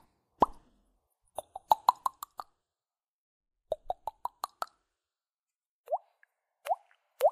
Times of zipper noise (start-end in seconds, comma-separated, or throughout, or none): 1.96-2.35, 5.96-7.24